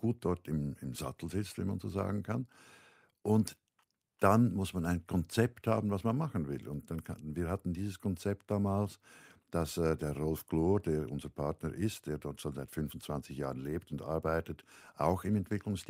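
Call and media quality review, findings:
No faults found in the speech signal; no defects identified on review.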